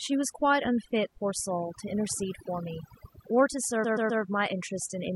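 Overdone noise removal runs throughout: aggressive suppression pulls frequency bands near the noise floor down, leaving a lowered background that breaks up into twinkling specks.

Repeated frames occur from 3.83 to 4.22 s: a 128 ms block is replayed three extra times, producing a stutter and adding 384 ms.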